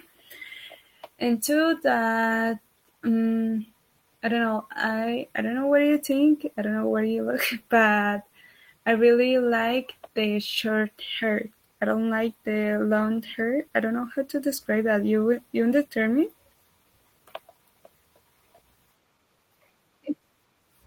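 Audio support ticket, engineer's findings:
No faults found in the audio; nothing to attribute to any component.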